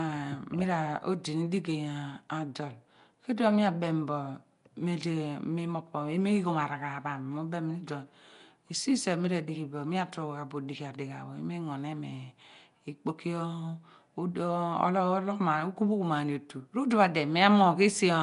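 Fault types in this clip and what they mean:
Nellymoser compression: all the way through, the speech carries a rough, hissy halo and a smeared, underwater feel, with nothing above 10.6 kHz. That's likely Flash's Nellymoser Asao codec filling bit-starved bands with noise, at what sounds like about 44 kbps.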